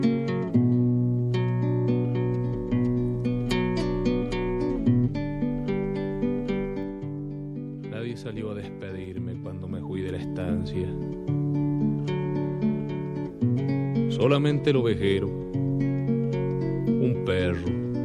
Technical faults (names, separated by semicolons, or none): zipper noise